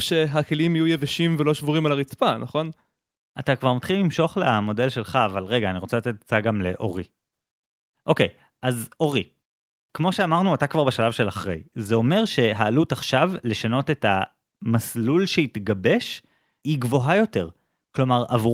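No fault can be heard anywhere in this speech recording.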